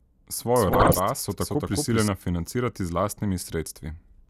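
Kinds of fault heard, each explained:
Doubled audio track: A second, slower capture path or an edit likely put a second copy of the same audio into the mix. From 0.56 s to 2.08 s the speech is joined by a full-band duplicate trailing it by about a fifth of a second, at roughly the same loudness, so every syllable is echoed flatly with no decay or room colour. The copy appears and drops out abruptly at those two points.
DAB burbling: Weak DAB reception let bit errors slip past error correction into the MP2 audio data. Corrupted samples put short blips of noise in single sub-bands, and corrupted scale factors make sub-bands jump in level for up to a frame. Between 0.73 s and 0.99 s the speech is overlaid with burbling. The length of the burst fits about eleven damaged frames, and its density points to an error rate of around one percent.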